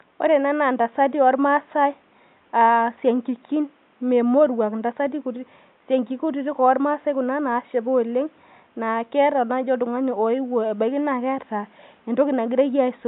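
No technical faults are audible.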